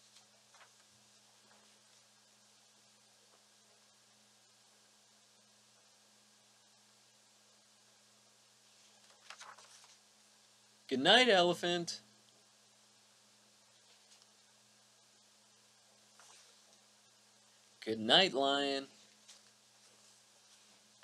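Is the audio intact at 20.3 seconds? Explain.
Yes, the audio is intact at 20.3 seconds, with no dropout, click, distortion or other fault at that moment.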